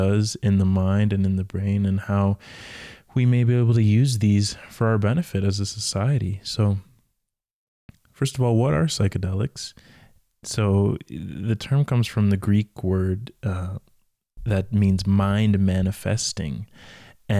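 No faults can be heard anywhere in this recording.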